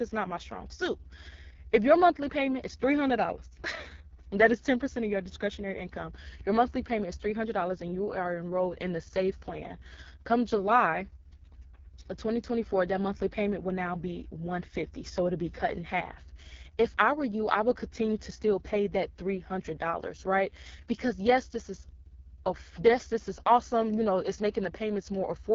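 From start to finish the speech carries heavy AMR wideband (HD Voice) codec damage, rough and raspy in a way that fits the codec's lowest 6.6 kbit/s mode. A spectrogram shows nothing above 7.1 kHz, with smeared, noise-like texture just below that ceiling.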